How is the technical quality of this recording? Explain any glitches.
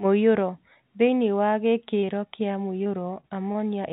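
It's a phone-band recording with two packet-loss glitches; nothing reaches above 4 kHz, which points to a G.711 mu-law call path at 64 kbps.

At 2.00 to 2.05 s there's short concealed packet loss: a sliver of audio arrived too late, and the decoder stretched the preceding sound over the hole, leaving a quick smear.

From 2.84 to 3.59 s it's repeated packet loss: about five dropouts, the longest 25 ms, each patched by continuation, so the sound turns choppy and robotic.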